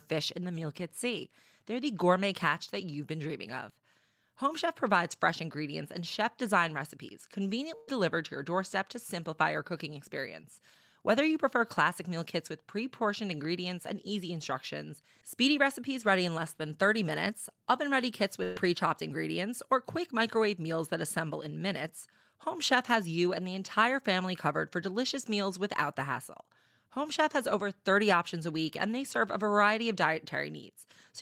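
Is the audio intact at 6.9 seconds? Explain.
Yes, at 6.9 seconds the speech plays through cleanly with no dropout, glitch or other technical fault.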